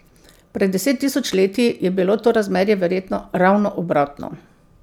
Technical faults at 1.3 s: loose connector crackle

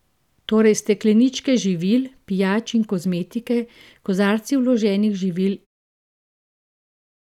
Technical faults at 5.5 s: none

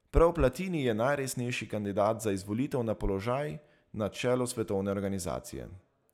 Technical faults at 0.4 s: none

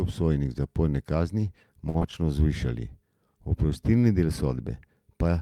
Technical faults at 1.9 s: short stall from a late packet; short concealed packet loss

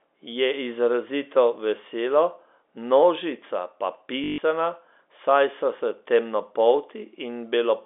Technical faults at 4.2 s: packet loss with last packet repeated

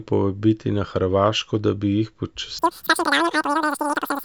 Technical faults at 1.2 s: none

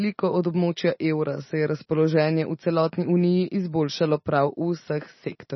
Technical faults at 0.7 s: MP3 compression

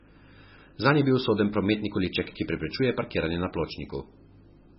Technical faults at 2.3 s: MP3 compression; loose connector crackle

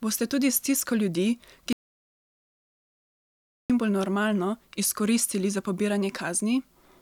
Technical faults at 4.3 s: none

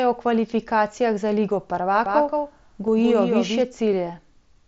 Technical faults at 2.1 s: doubled audio track

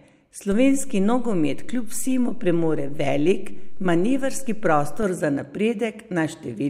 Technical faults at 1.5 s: DC step

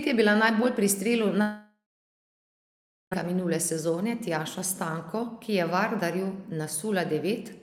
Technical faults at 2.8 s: long network dropout

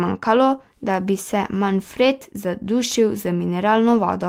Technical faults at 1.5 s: none

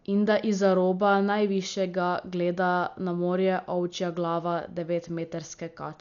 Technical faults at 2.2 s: Dolby Digital compression

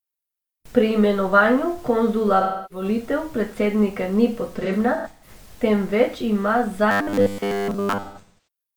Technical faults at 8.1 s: robotic sound from repeated short buffers; AAC frame loss with concealment

